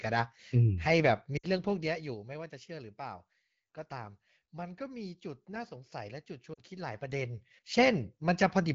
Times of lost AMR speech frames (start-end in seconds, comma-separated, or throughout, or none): 1.37-1.47, 6.53-6.61